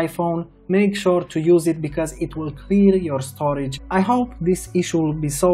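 At 3.76 s there is a brief blip and the sound jumps forward abruptly, with no fade or crossfade to smooth the transition. This is likely a stream segment skipped: one chunk of a segmented stream failed to arrive or decode in time, and the player moved straight on to the next one. The audio on either side of the join does not connect, and the blip marks the splice point.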